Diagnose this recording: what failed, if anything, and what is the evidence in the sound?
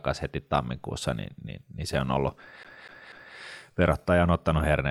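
Playback fault, a CD stuck on one turn: the laser jumps back every rotation, so a 0.24 s fragment stutters three times, 2.63–3.36 s, after "niin se on ollut".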